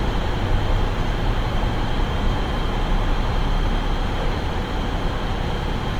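From start to finish the sound carries Opus compression, likely at a low rate near 24 kbps in music mode. Tones turn grainy and rough as noise fills thin bands. A spectrogram shows speckled, noise-textured bands reaching about 20.1 kHz, without sharp holes.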